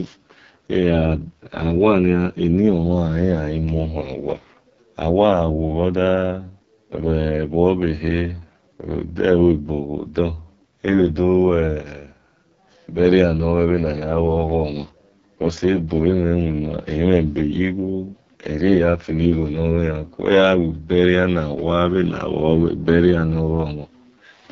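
From start to finish, the speech carries AMR wideband (HD Voice) codec damage, and it is heavy. The voice sounds rough and raspy, typical of the codec's lowest mode, around 6.6 kbit/s. Everything above 7.4 kHz is missing, and the top band is synthetic noise.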